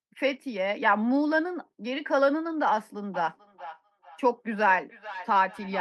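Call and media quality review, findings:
Feedback echo between two devices, 3.14 s to end. Speech returns roughly every 0.4 s, thinner and ringing, loudest about 15 dB below speech. Second device in room replays this mic's signal. Local echo canceller cannot remove it.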